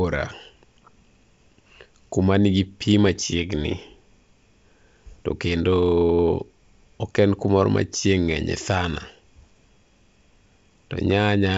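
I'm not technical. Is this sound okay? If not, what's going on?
No. At 3.06 to 3.18 s, just after "kuma nigi pi", and again at 10.72 s, there are rough pops. These are bit errors on an ADPCM link: scattered corrupted bits knock the wideband phone decoder off track briefly.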